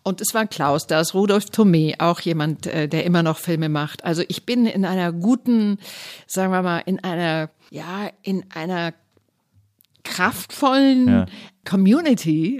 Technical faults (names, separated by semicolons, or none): none